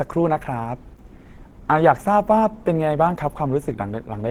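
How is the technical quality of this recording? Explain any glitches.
The quality is compromised throughout by audible coding damage. From start to finish the speech sounds hoarse, rough and grainy, the likely result of Opus compression in its hybrid speech mode at a rate that fits roughly 16 kbps.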